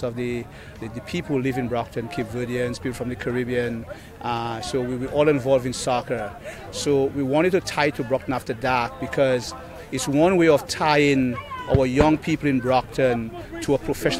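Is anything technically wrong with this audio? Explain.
No, I don't hear any technical problems in this recording.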